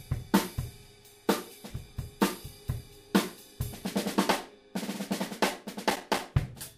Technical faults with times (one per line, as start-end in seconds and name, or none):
5.90-6.19 processor overload crackle